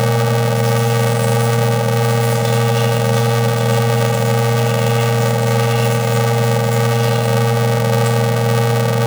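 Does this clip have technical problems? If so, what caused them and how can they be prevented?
Yes. Throughout the clip the sound has a robotic buzz at about 345 Hz and no clear octave shift. This is planar audio read as interleaved. Each block of roughly 2.9 ms, which fits a 128-sample block, holds all left samples followed by all right samples, but the player treats them as alternating left-right pairs. The sound therefore arrives chopped into tiny sped-up fragments that repeat at the block rate. To prevent this, match the reader's channel-layout setting to the planar format the source actually delivers.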